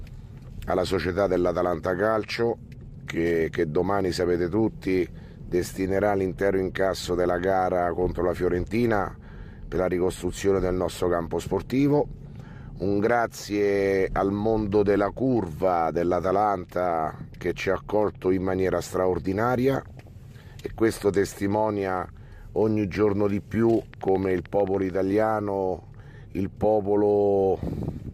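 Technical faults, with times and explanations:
19.82 to 20.08 s, DAB burbling: weak reception let bit errors, around half a percent, slip past error correction into the MP2 data, corrupting samples and scale factors in what sounds like about a dozen frames, so single sub-bands get short noise blips and jump in level.
23.94 to 24.91 s, train of clicks: likely interference from nearby equipment or a faulty connection injects a pulse 13.5 times a second at regular spacing, giving around fifteen alike clicks, each roughly as loud as the sound itself, heard as steady ticking.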